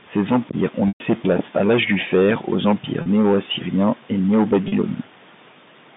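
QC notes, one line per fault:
0.88–1.00 s, packet loss with pitch repetition: after "empires ont" the sound sticks on a buzzy, repeated pitch cycle, fades toward silence, then cross-fades into "place à". About 120 ms went missing, longer than the roughly 50 ms the repeated cycle lasts before fading.
3.02 s and 4.68 s, packet loss with pitch repetition: each is a brief, slightly held buzzy note with no silence, as 40 ms of lost audio is bridged by repeating the last pitch period. Both gaps fit a loss of 20 ms packets on this G.711 telephone line.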